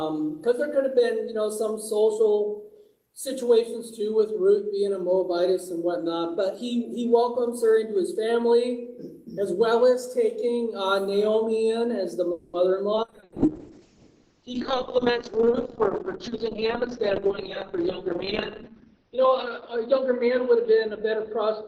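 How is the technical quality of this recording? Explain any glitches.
The second half of the recording has several network-related faults, clustered after 12.3 s.

From 12.31 to 12.56 s there is a call audio freeze: the sound hangs for about 220 ms as a decaying buzz or hiss, then resumes with nothing lost. The likely cause is delayed packets draining the jitter buffer. On a spectrogram this appears as a smeared, fading band.

At about 12.95 to 12.99 s the audio skips ahead. Roughly 70 ms is dropped and the two sides are butted together, with only a 10 ms fill. The waveform shows an abrupt splice and the spectrogram a sudden discontinuity.

A call bitrate drop starts at 13.08 s and lasts to the end. The encoder falls from 32 to 6 kbps, holding the lowest rate for about 5.6 s. Bandwidth narrows from 20 kHz to 6 kHz, so the sound turns muffled and rough. The spectrogram loses everything above 6 kHz.

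From 14.49 to 15.13 s a jitter buffer slow-down repeats short periods to rebuild the buffer. It adds 36 ms, so playback runs at 95% speed with the pitch unchanged. Drawn-out stretches show as elongated, repeated waveform cycles.

Jitter buffer speed-up follows twice as the receiver trims excess delay by cutting short pitch periods. From 16.28 to 18.23 s it runs at 106%, removing roughly 150 ms. From 18.73 to 19.30 s it runs at 108%, removing about 50 ms. Both stretches sound hurried at the same pitch, and the spectrogram shows compressed timing.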